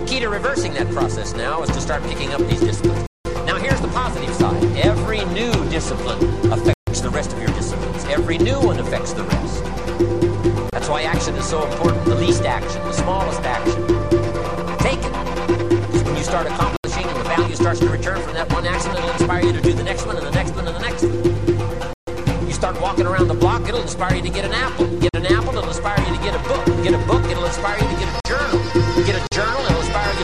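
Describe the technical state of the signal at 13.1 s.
At 13.1 s the signal is intact, with no dropout, clipping, glitch or other fault audible at that point.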